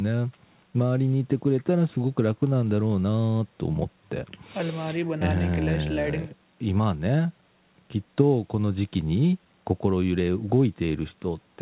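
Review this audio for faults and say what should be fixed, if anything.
Nothing here needs fixing: the speech comes through the way a call normally does, and the G.711 A-law coding keeps everything below 4 kHz, which is just how that codec sounds.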